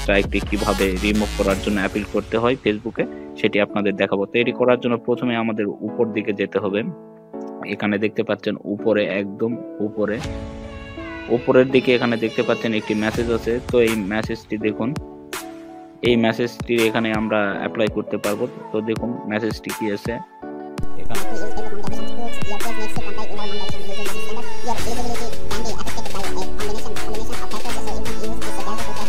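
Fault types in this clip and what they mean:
No fault types are present in this clip.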